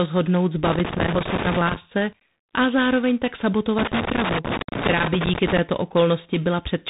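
From the start, the speech carries tandem speech coding. The call seems to have passed through two speech coders in a row, with a plain telephone link between them. That fits G.726 ADPCM at 24 and then 32 kbit/s, joined by a mu-law G.711 stage. Each coder reworks the errors of the one before. Nothing is heard above 3.8 kHz. The sound is rough, with a granular, noisy edge.

From 0.64 to 1.76 s, loose connector crackle breaks in. A worn or dirty contact is making and breaking in quick succession. The signal is chopped into fragments. It comes across as an uneven scratchy burst over the speech. It returns from 3.78 to 5.58 s. That stretch is longer and just as irregular.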